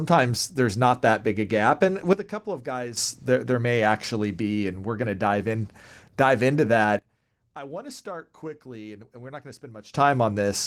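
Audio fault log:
2.13–2.97 s and 6.99–9.94 s, sudden gain jump: the speech and its background noise drop together by about 12 dB, ending just before "there there may actually", then by about 18 dB right after "dive in dive into". The likely cause is a digital gain change applied instantly, without a ramp.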